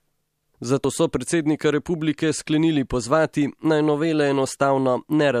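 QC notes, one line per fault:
0.84 s, compressed frames skipped: the speech jumps forward by about 50 ms, roughly two frames of the 26.1 ms frame length, as if whole compressed frames never reached playback. Because adjacent frames overlap, the decoder blends across the gap, so the join is a short smeared blip rather than a sharp click. Unlike a dropout, there is no silent hole, only lost sound and a forward lurch in timing.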